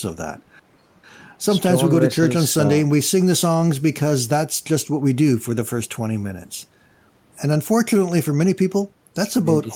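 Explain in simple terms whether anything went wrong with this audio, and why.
Nothing went wrong here: the speech signal stays steady and intact throughout, with no technical problems to be heard anywhere in the recording.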